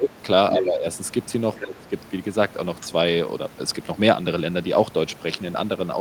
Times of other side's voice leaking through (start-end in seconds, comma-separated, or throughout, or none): 0.50-0.63, 1.60-1.72, 2.81-2.86